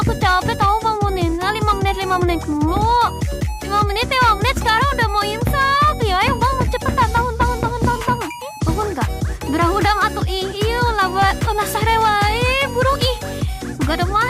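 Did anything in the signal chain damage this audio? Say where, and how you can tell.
Yes, at the converter. From 3.0 s to the end, a hiss and roughness rides on the sound, growing on loud, bright passages and vanishing in silence. That is sample clock jitter: timing wobble of roughly a microsecond and a half, leaving errors about 40 dB down.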